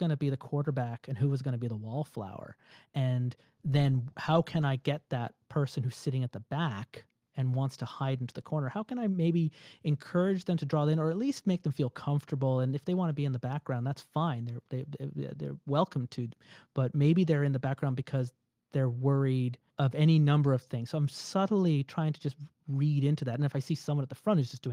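Speech clip, no technical faults.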